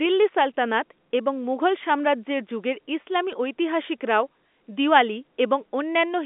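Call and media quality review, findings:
Bit errors on a digital phone line at 3.32 s: brief crackle of sharp ticks from flipped sign or high bits in single samples, an error rate of around a tenth of a percent. Waveform shows isolated one-sample spikes; spectrogram shows thin full-band vertical lines within the G.711 band.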